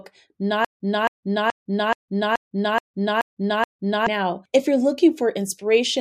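The player or stream likely stalled, replaying its last fragment at each retry: a stutter with silent gaps from 0.65 s to 4.07 s. The same 271 ms burst of speech returns eight times, each followed by 156 ms of digital silence, and the audio due there is lost.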